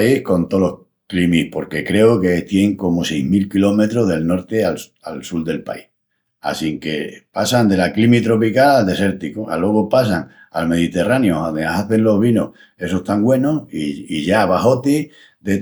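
At 11.17 s a single sharp click marks dropped samples, likely a handful lost, so the waveform jumps abruptly, showing a thin vertical line across the spectrogram.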